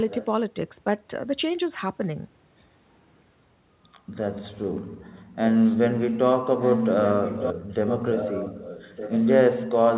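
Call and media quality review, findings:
Echo leak: delayed copy of the talker, about 1.2 s behind, at 0.0–0.25, 5.3–5.36, 6.61–6.85, 7.04–7.53 and 7.86–9.29 s. Faint early, then up to nearly as loud as the live speech. Likely far-end echo canceller residual returned over the call, band-limited to 4 kHz.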